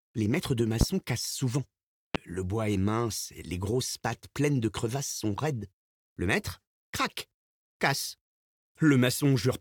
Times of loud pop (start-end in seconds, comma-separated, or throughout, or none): 0.81-0.85, 2.15-2.18